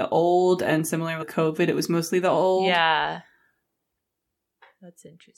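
Damaged data in a compressed stream appears at 1.21 to 1.23 s, between "old and similar" and "covid it was mostly". Corrupted bytes make the decoder misread those frames and lose sync until the next frame header, leaving a brief disruption in the speech.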